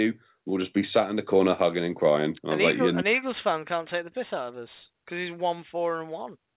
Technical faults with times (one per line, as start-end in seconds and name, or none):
none